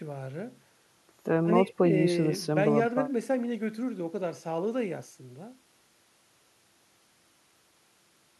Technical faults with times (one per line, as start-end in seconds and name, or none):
none